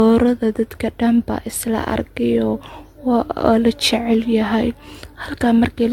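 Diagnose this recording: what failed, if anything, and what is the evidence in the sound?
Codec stage. Across the speech clip the sound is swirly, smeared and hollow. Attacks blur, and nothing remains above 17 kHz. The likely cause is generation loss. Around seven AAC passes each requantised on a shifted frame grid, so noise and spectral holes accumulated.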